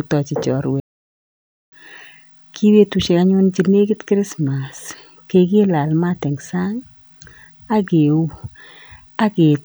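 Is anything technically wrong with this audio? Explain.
Yes. From 0.80 to 1.72 s the speech cuts to silence for about 0.92 s, then resumes: a playback stall, likely the player starved of data or blocked.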